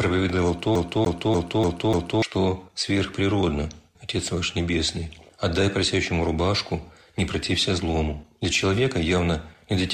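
From 0.75 to 2.22 s the CD is stuck on one turn: the same 0.29 s slice of sound repeats five times, with a brief mute at each jump back. That fixed, evenly spaced loop marks a skipping disc, unlike a stream dropout, which never repeats material.

At 3.94 s the sound jumps forward abruptly with a small blip, and the passage simply continues from a later point. This is likely a stream segment skipped, where a failed segment is passed over. Nothing repeats, which separates it from the CD loop.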